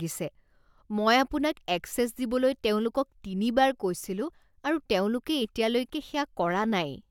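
Speech, with no audible technical fault anywhere in the recording.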